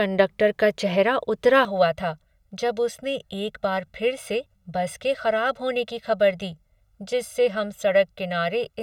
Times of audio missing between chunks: 1.98, 4.46, 6.95

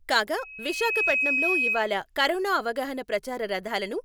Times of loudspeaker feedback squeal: 0.37-1.92

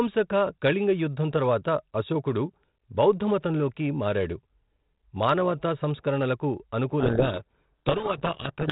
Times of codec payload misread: 7.00-8.71

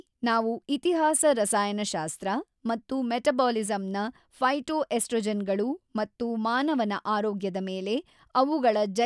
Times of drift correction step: none

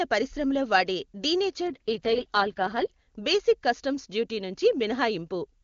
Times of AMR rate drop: 1.69-2.92

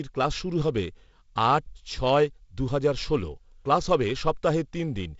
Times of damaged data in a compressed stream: none

